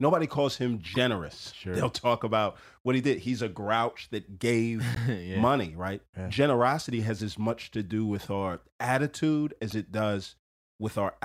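At 0.93 to 0.96 s, just after "calls him", a short burst of damaged data in the compressed stream interrupts the speech. It recurs at 4.95 to 4.97 s, between "a grouch that gave" and "yeah money right", and at 9.70 to 9.73 s after "do with our attitude". Each time the decoder hits corrupted frame bytes, misreads them and loses sync while hunting for the next valid header, producing a brief chirp or squawk lasting about 20 to 30 ms.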